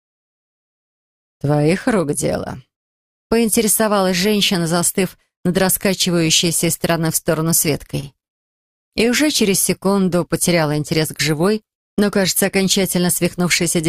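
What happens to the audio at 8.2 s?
Repeated stalls (stutter) run from 7.87 to 8.66 s: late packets drained the jitter buffer four times, and the receiver stretched the last sound through gaps up to 40 ms, so the audio drags and stutters.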